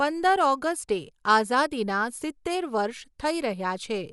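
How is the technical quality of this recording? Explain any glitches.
The technical quality is limited: the speech sounds dull and band-limited from start to finish, with a rough, fluttering grain around the voiced tones. Nothing reaches above about 11.4 kHz. The likely cause is Dolby Digital compression at a low bitrate, consistent with roughly 64 kbps. At that rate the encoder narrows the band and leaves many frequency lines without precise values, so the decoder fills them with noise. That produces the plainly audible muffled, gritty texture.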